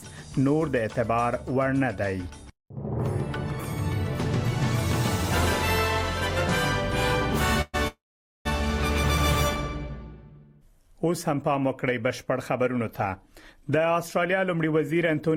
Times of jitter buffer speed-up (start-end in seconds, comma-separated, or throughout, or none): 12.63-15.36